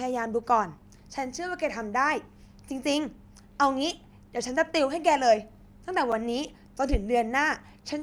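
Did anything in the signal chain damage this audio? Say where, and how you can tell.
Yes: a block of digital silence at 6.12 s in the speech, a tick from the buffer stage, where 5.8 ms dropped to zero with hard edges, which fits a 256-sample buffer not filled in time.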